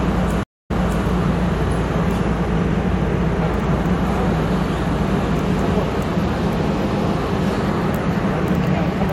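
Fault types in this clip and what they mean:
stream reconnect: the connection dropped, the player fell silent for about 0.22 s, then reconnected with a fresh decoder. Playback resumes roughly 0.39 s earlier than where it stopped, so a short stretch of sound repeats around 0.43 to 1.05 s.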